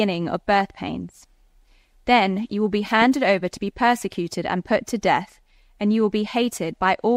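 No technical fault can be heard anywhere in this audio.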